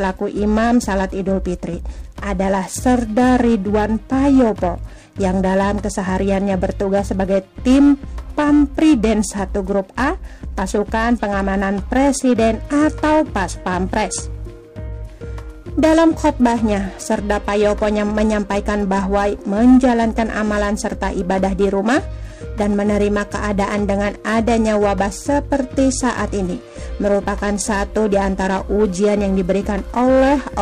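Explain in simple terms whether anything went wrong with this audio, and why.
Yes, something went wrong: the whole recording carries periodic clock jitter. The timing clock that paces the converter was being nudged back and forth by interference at a steady rate, somewhere around 1 kHz. That wobble adds extra tones just above and below every sound, spaced by that rate, and they are strongest on the brightest, highest parts. The result is a rough, metallic edge that rides on the sound from start to finish and drops away whenever the audio goes quiet.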